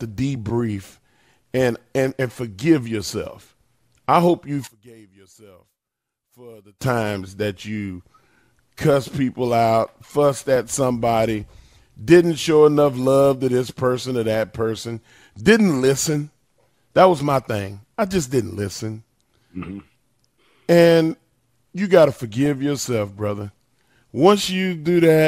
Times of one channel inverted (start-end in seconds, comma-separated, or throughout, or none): 4.67-6.82